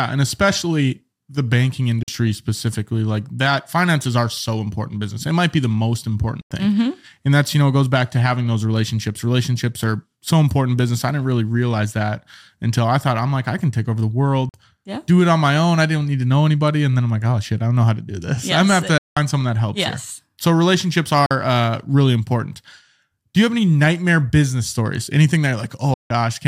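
The speech breaks into silence six times, at 2.03 s (between "and especially the banking" and "specifically like that finances"), 6.41 s, 14.49 s, 18.98 s, 21.26 s (just before "uh really important") and 25.94 s (after "nightmare business stories anything"). The gaps last about 46, 93, 46, 186, 46 and 163 ms. Each is a Bluetooth dropout, likely from packets arriving too late at the headphones. Speech resumes as though it had kept playing, with nothing lost from the timing. The gap lengths, all multiples of roughly 23 ms, fit whole packets going missing. On a waveform each appears as a flat hole with abrupt or briefly faded edges. A spectrogram shows a clean vertical blank band across all frequencies.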